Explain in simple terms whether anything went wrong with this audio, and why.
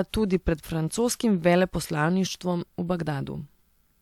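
Nothing went wrong that I could hear: listening to the recording, nothing about how it was captured or played back stood out as a problem.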